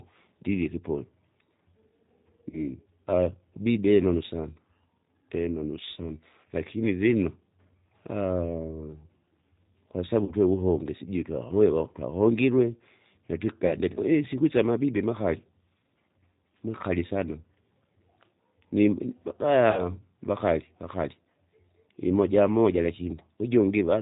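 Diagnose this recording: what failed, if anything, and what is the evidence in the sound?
The speech sounds narrow and slightly rough, with a synthetic edge throughout and no treble above 4 kHz. This is codec damage, plainly audible and consistent with the G.729 codec, most likely the G.729A variant at 8 kbit/s. The decoder rebuilds each 10 ms frame from a vocal tract filter, a pitch predictor and a few pulses rather than the actual waveform, so fine detail is lost and the sound takes on that artificial texture.

Four brief disturbances interrupt the speech: 2.51 to 2.64 s, 10.25 to 10.33 s, 13.67 to 13.72 s and 19.71 to 19.83 s. At each, the speech is stretched into a buzzy tone or a coloured noise that sags in level, then takes a moment to recover. This is VoIP packet loss concealed by the speech codec, a network fault. The gaps are 20, 40, 20 and 60 ms, fitting one, two, one and three lost packets. 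The decoder extrapolated from its last pitch and filter with falling gain, and because each frame builds on the previous one, the distortion outlasts the gap itself.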